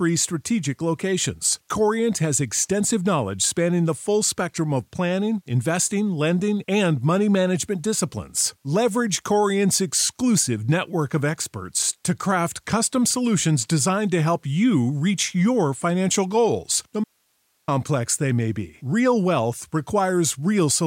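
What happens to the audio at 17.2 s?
At 17.2 s the speech hits an audio dropout to a faint residue. Right after "your financial goals no", the signal vanishes abruptly at 17.04 s and returns at 17.68 s with "they may be". That is about 0.64 s lost. The gap is not silent. It holds only hiss, around 45 dB below the speech. The likely cause is a brief loss of the source while the path behind it stayed live, passing its own noise floor.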